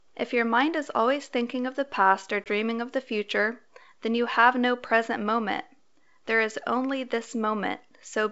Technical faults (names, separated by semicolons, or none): packet loss on an ADPCM call